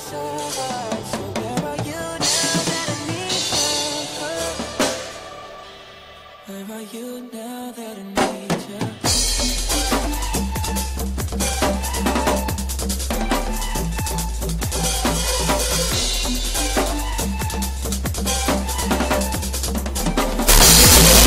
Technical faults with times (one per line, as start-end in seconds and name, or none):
20.49-21.26 float read as integer